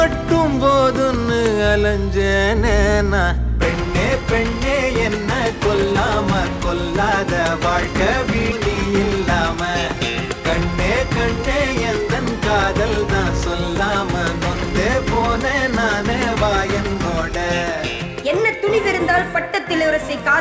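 The audio has passed through a call path whose G.722-style coding leaves nothing above 8 kHz. At 8.52 s there is a skip ahead. Roughly a second of sound is dropped, and the two sides join with no gap. Jitter buffer speed-up follows from 9.54 to 10.41 s, running at 118% of normal speed. About 150 ms is trimmed in small pitch-period pieces, so the sound hurries at unchanged pitch. A milder speed-up runs from 15.55 to 16.95 s at 104%, removing roughly 70 ms as the buffer sheds extra delay.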